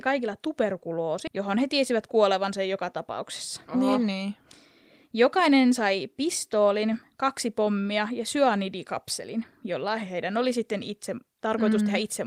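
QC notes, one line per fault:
1.27 s, skip ahead: the speech jumps forward, with about half a second of audio simply missing and no silence or fill at the join. Audio that was already queued got discarded, likely by an overflowing jitter buffer, so playback resumes later with the two sides spliced almost directly.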